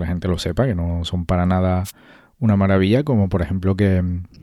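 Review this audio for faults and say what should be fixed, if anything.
A wireless microphone noise hit occurs from 1.84 to 1.91 s. The radio signal fades and receiver noise bursts through as static. Use diversity receivers and closer antennas.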